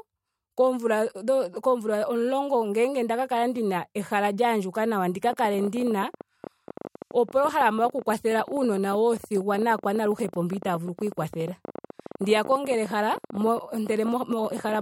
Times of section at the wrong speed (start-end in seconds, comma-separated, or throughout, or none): none